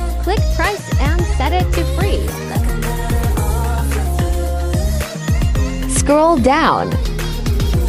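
Nothing stood out on listening; no faults could be heard anywhere in the audio.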